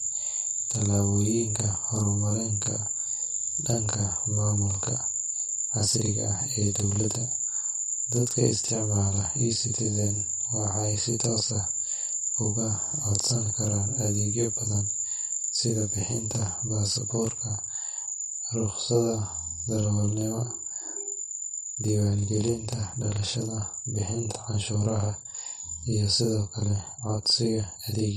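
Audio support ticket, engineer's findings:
Channel delay (doubling) throughout the speech: every syllable is followed by an equal-level second copy 40 ms behind, heard as a slap-like double. Probable cause: one channel held back by an oversized buffer, then both summed to mono.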